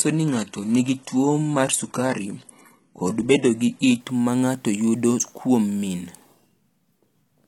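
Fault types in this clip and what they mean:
Adaptive stream starting at a low bitrate: the player opened on a cheap, low-bitrate rendition so playback could begin at once, then switched to a better one after gauging the connection. From the start to 4.0 s the speech has thin, synthetic-sounding treble with nothing above about 11.8 kHz and heavier codec smearing, which points to a low-rate HE-AAC stream. Just before "ma ng’ato yudo kuom" the quality jumps cleanly, with no gap, to a fuller sound consistent with a higher-rate AAC stream.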